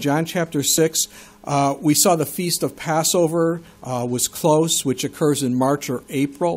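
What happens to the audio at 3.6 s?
Mains buzz runs from 3.24 to 5.28 s, so it covers 3.6 s. Sharp switching spikes from a dimmer, rectifier or unshielded line arrive twice per 50 Hz cycle, stacking harmonics into the kilohertz range. The result is a steady, raspy buzz sitting well below the main sound.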